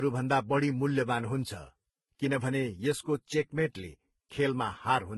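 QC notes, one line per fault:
Throughout, transcoding between lossy codecs: stacked codec artefacts, nothing above 11.8 kHz, likely from speech passing through several low-bitrate lossy codecs, each adding its own damage.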